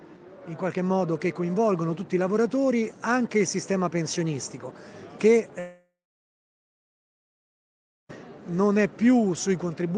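A long network dropout, likely, cut the incoming stream from 5.59 to 8.11 s: a brief fading buzz or hiss continues the last sound, then about 2.2 s of silence before audio resumes.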